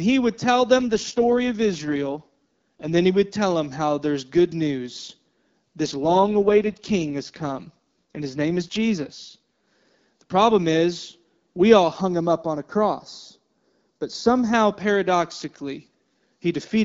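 From 0.76 to 2.98 s, right after "he would tell" and up to "he would tell them", and again from 5.85 to 9.39 s, the speech turns rough and synthetic with no gap and no loss of bandwidth. This is an AMR rate drop, consistent with the AMR-WB codec stepping down from 12.65 to 6.6 kbit/s.

From 12.01 to 14.53 s, after "problem is we all", the sound becomes hollow and phasey, with a notch around 3 kHz. This is channel delay comb filtering: one channel lags by a fraction of a millisecond, and summing to mono cancels energy at evenly spaced frequencies.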